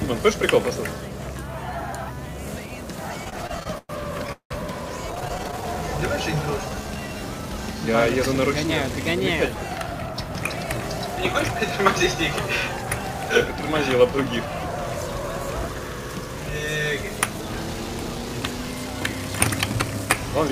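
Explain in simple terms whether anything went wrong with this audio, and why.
Repeated stalls (stutter), from 3.24 to 4.52 s and again from 5.12 to 5.64 s: data arrived late, so playback kept running dry. Each time, the player stretched out the last bit of sound to cover the wait, so the audio drags and stutters. The longest gap was 184 ms, and about a third of the first stretch was filled in this way.

Jitter buffer slow-down, from 6.61 to 7.19 s: the player's reserve was running low, so it repeated tiny slices of sound to rebuild it. This added 120 ms, and the audio plays at 81% speed with the pitch unchanged.

Jitter buffer speed-up, from 9.15 to 11.33 s: the player had built up more stored audio than it needed. To catch up, it cut out tiny slices, roughly 150 ms in total. The audio runs about 6% fast with the pitch unchanged.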